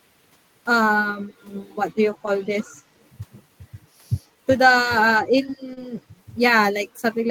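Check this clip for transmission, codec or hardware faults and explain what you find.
Four kinds of fault are audible, concentrated around 2.5 s and 5.2 to 5.9 s of the speech.

Speech suppressed in double talk, at 2.46 to 2.77 s and 5.2 to 5.59 s. The level dips by around 10 dB in the first stretch and around 20 dB in the second, turning the voice down. The likely cause is an echo canceller mistaking simultaneous talk for loudspeaker echo and attenuating everything.

Echo leak, at 5.47 to 5.57 s. A faint copy of the voice trails it by 122 ms, about 10 dB below the speech, heard as a brief ghostly doubling. The likely cause is a far-end echo canceller letting some of its microphone's pickup of its loudspeaker pass back.

Short concealed packet loss, at 5.73 to 5.86 s. About 40 ms of audio never arrived in time. The decoder extended the preceding sound for roughly 31 ms and blended back, producing a brief smear where detail momentarily flattens.

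Lost packet rebuilt from error correction, at 5.77 to 5.83 s. About 40 ms was played from low-bitrate backup copies carried in the following packets, which points to two lost 20 ms frames. There is no gap, but that moment sounds rougher and noisier than its surroundings.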